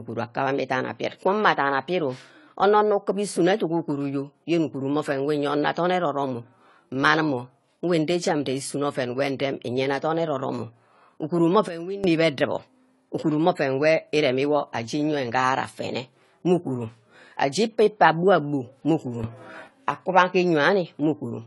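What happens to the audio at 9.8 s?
AAC compression runs through the whole clip, 9.8 s included. The speech has nothing above 11.5 kHz and sounds dull and smeared, with a warbling, fizzy edge on sibilants. This likely comes from AAC-LC coarsely quantising each frame's spectrum at a low bitrate, around 32 kbps.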